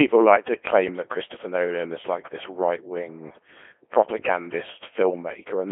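Robotic, buzzy speech is confined to a narrow 300 Hz to 3.4 kHz telephone band throughout, with heavy damage from the Codec 2 vocoder. Only pitch, voicing, energy and a spectral envelope survive, rebuilt from sine waves, which fits a rate around 2.4 kbit/s.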